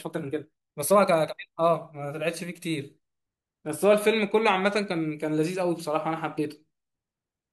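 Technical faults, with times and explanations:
0.00–1.78 s, time-stretched section: the speech runs about 1.67 times faster than normal while its pitch stays put, then the pace drops abruptly to normal. It sounds rushed, likely because software shortened this stretch by dropping short slices of audio.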